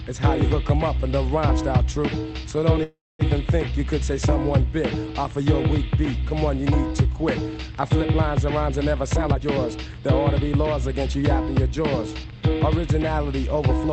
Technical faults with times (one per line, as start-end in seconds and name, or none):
2.83-3.22 call audio freeze
9.14-10.09 jitter buffer speed-up